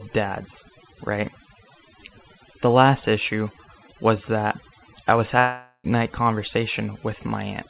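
Throughout the speech, overdone noise removal has suppressed bands near the noise estimate, leaving a near-silent, twinkling background within the 4 kHz call bandwidth. From 5.39 to 5.87 s, after "was that I was", a long network dropout likely occurred: the last sound is stretched into a fading buzz for about 0.45 s, followed by brief silence, and the lost audio never returns.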